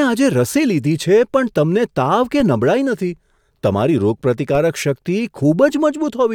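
Speech with two DC steps, at 2.40 s and 4.55 s: the zero line jumps by about −17 dBFS, giving a low thump and a waveform offset that decays through a 20 Hz high-pass, with a brief vertical broadband stripe on the spectrogram.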